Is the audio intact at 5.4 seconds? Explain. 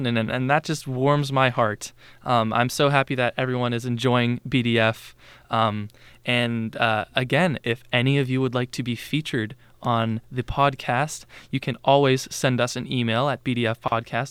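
Yes, the speech at 5.4 seconds is intact, with no dropout, glitch or other fault at that moment.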